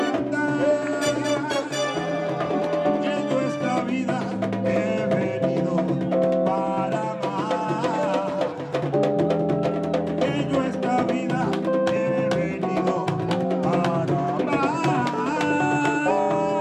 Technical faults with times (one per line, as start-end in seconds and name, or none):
none